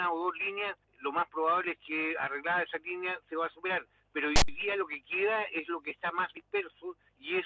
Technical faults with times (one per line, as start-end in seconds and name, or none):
4.36-4.48 file tags played as audio